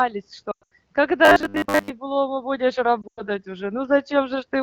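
From 0.51 to 0.74 s the speech dips and warbles, then drops to near silence within two frames before returning weak and rough. These are lost AMR speech frames: corrupted frames failed their checks over about 200 ms, with one stretch around 100 ms long, so the AMR-WB decoder kept reusing the last good pitch and vocal tract settings at falling gain. The same quick fade to near silence returns from 3.02 to 3.22 s, again with a run of about 100 ms.

Between them, from 1.25 to 1.90 s, the speech turns into a rigid, metallic buzz at a fixed 100 Hz that still roughly tracks the syllables. This robotic sound from repeated short buffers likely comes from audio arriving too late: a 10 ms chunk, matching that 100 Hz pitch, was repeated for most of the stretch while the real audio was skipped.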